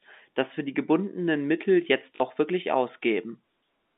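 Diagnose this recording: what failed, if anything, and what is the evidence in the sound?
Packet loss with last packet repeated, 2.16 to 2.2 s, a network fault: 40 ms of speech is missing, which fits two lost 20 ms packets. The receiver replays the last good packet across the gap, producing a short robotic stutter.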